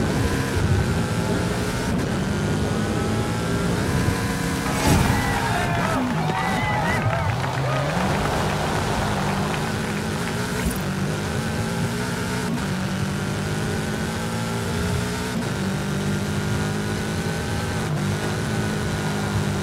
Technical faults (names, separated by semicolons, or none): none